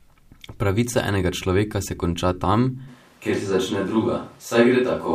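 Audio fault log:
2.89 s to end: switch to a distant microphone. Right after "človeka se konča tam" the speech turns roomy and hollow with thinner bass, while loudness barely changes, so the close microphone likely dropped out and a farther one carried on. Background noise rises to roughly 35 dB below the speech. On a spectrogram the low band thins and a steady noise floor fills the gaps between syllables; the waveform shows smeared decays instead of clean pauses.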